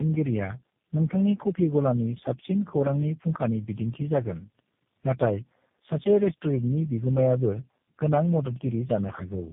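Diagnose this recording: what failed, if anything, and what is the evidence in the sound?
The fault is tandem speech coding, at the codec stage. It runs throughout. The speech is rough, muffled and warbly, with nothing above 3.7 kHz. That fits three speech codecs in a row, each re-coding the previous one's damaged output.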